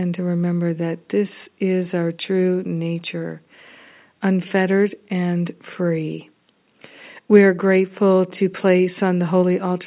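No technical faults can be heard anywhere in the recording; the speech signal stays continuous and intact throughout.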